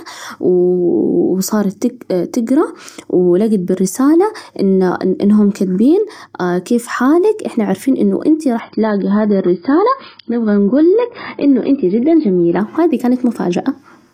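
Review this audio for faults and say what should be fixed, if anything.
From 8.60 s to 12.60 s the speech drops to an adaptive stream at a lower bitrate: for about 4 s the treble vanishes above 5.1 kHz and codec artefacts rise, consistent with a switch from roughly 96 kbit/s to about 16 kbit/s AAC as the connection slowed. On a spectrogram the upper band cuts off abruptly in a flat-topped block; the waveform shows no gap. Giving the player a larger buffer or a higher minimum bitrate would prevent it.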